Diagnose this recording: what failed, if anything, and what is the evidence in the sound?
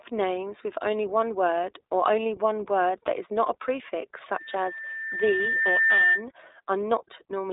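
iLBC codec, throughout the recording: the speech has a rough, slightly synthetic texture, and the band runs from about 300 Hz to 3.7 kHz with nothing above 3.8 kHz. At the codec stage, each frame's excitation is coded independently, which fits 20 ms frames at 15.2 kbps.

Loudspeaker feedback squeal, from 4.33 s to 6.26 s: a steady 1.8 kHz tone swells over roughly a second and a half until it sits a few decibels above the speech. At the playback stage, the microphone picks up its own loudspeaker, and loop gain exceeding one at that frequency lets the tone build.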